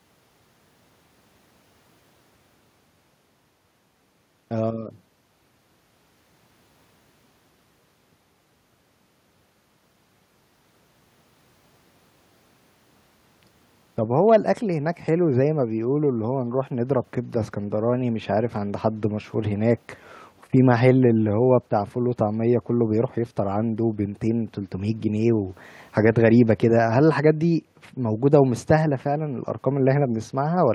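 No technical faults are audible anywhere in this speech recording.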